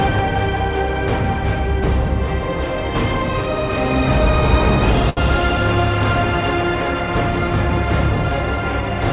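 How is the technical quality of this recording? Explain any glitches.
One glitch stands out: a short stall from a late packet between 5.10 and 5.19 s, heard over a call-path sound with nothing above 4 kHz, which fits G.711 mu-law at 64 kbps. A packet arrived late, the jitter buffer ran dry, and the receiver stretched the last sound for 73 ms before resuming where it left off, so nothing is lost and playback runs 73 ms later. It is heard as a briefly held sound with a faint buzz or dip. A spectrogram shows flat, smeared horizontal bands there, and the waveform shows a repeated, slightly dipping cycle.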